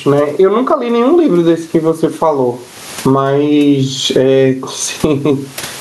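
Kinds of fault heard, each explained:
Gain pumping, throughout: the room noise, about 38 dB below the speech, swells in each pause and ducks under every loud sound, a swing of roughly 25 dB that squashes loud and soft together. The likely cause is microphone gain set far too high, with a fast limiter pulling down each peak.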